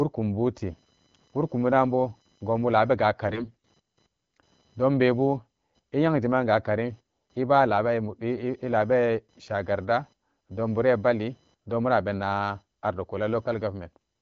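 A faint buzz with a pulse rate around 1 kHz sits far below the speech, roughly 40 dB down, for the whole clip. This is computer activity noise: processor, graphics or mouse load shifts the shared ground of the audio circuit, so the buzz tracks the machine's activity, not the sound.

From 3.28 to 3.68 s, right after "bu dunbo gonbu labega", the speech turns hoarse, scratchy and gargly while keeping roughly its pitch and loudness. These are AMR bit errors. Over a weak link, a sizeable share of the less protected bits in the AMR-WB frames arrived flipped, yet each frame still passed its checksum. The damage spans about 0.4 s, which fits a run of around 20 consecutive 20 ms frames. Misplaced excitation pulses and off values for the finer pitch, gain and spectral details produce the rasp. Before and after this burst, the 12.65 kbit/s HD Voice coding leaves the speech clear.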